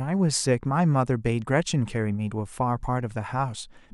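Speech recording; no technical faults can be heard anywhere.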